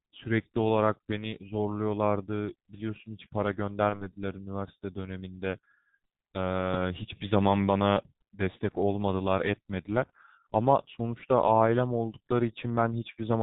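It's a speech clip squeezed through the G.723.1 codec, and heavily at that: nothing above 4 kHz survives, the voice comes out muffled and hoarse, and consonants smear together, which fits the codec's low 6.3 kbit/s mode and its 30 ms frames. Around 3.89 to 4.10 s there's VoIP packet loss concealed by the speech codec. It sounds like a single 30 ms frame went missing, and the decoder filled it by stretching its last pitch and filter into a fading sound. Because each frame leans on the previous one, the voice stays weak and off for tens of milliseconds or more before it recovers.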